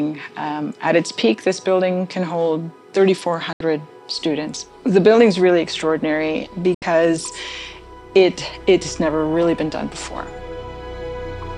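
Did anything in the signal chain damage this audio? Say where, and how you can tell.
Yes, a digital broadcast dropout hits the reception stage twice, at 3.53 s and again at 6.74 s. Each time the sound fades out over about 3 ms, stays silent for about 80 ms, and then resumes further along. The gap fits roughly three lost frames. The material sent during the mute is simply gone.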